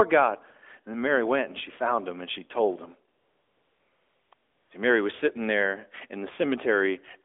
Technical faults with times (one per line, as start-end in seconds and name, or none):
3.18-4.70 AMR comfort noise